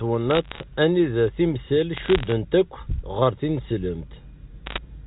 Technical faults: bit errors on a digital phone line

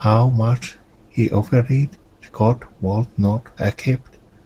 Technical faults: Opus voice compression

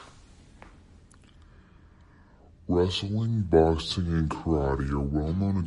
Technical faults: wrong sample rate

